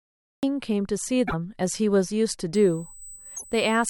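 The clip opens on dead digital silence that runs to 0.43 s, where the speech begins abruptly, already in progress, with no rise or fade into it. This is a cut-off start: capture or streaming began late, so the first part of the utterance was never recorded and the signal simply switches on mid-sound.

At 1.27 to 1.34 s, and again at 3.36 to 3.45 s, the speech briefly skips forward and a short smear of chirpy noise, or a momentary hole, replaces it. Each glitch spans roughly two to four 26.1 ms MP3 frames. The likely cause is a broken MP3 bit reservoir. Frames were lost, and the frame after each gap tried to borrow bits stored in the missing ones, decoding stray data instead until the stream resynchronised.

From 2.55 s to the end, a thin, steady high-pitched whine sits under the speech at 8 kHz, about 20 dB below the signal. This is USB whine. The bus's 125-microsecond microframe activity draws current in regular pulses, and that rhythm leaks through shared power or ground into the audio path as a fixed 8 kHz tone.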